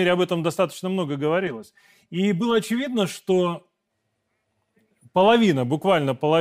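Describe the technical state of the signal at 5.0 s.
At 5.0 s the speech signal is intact, with no audible dropout, distortion, clipping or other fault.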